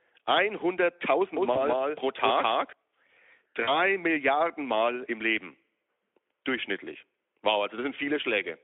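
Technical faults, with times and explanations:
1.37–2.73 s, doubled audio track: a second, slower capture path likely fed the same speech back in, so an equally loud full-band copy trails about a fifth of a second behind, starting and stopping abruptly.
1.53–1.65 s and 3.63–3.81 s, VoIP packet loss concealed by the speech codec: 20 ms, then 40 ms, of packets went missing. The Speex decoder extrapolated and faded, leaving a weakened stretch that lingers past each gap.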